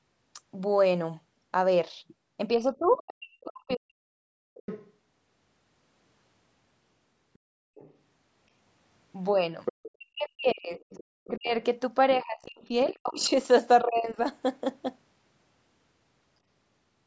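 From 2.56 to 4.11 s the speech is suppressed in double talk, with gaps deepening to about 40 dB. Overlapping talk likely made the echo canceller duck everything, leaving near-silent holes in the waveform. Next comes the other side's voice leaking through at 4.54 to 4.92 s (about 15 dB below the speech), 7.34 to 7.94 s (about 30 dB below) and 9.65 to 9.91 s (about 10 dB below). This is likely residual loudspeaker echo the canceller missed, seen as separate harmonic traces on the spectrogram. Suppression returns from 9.93 to 11.53 s, around 40 dB deep, while leaked voice sits at about 25 dB down from 10.51 to 11.3 s. From 12.17 to 14.18 s the speech dips again by about 25 dB, with leakage about 25 dB down from 12.91 to 13.29 s.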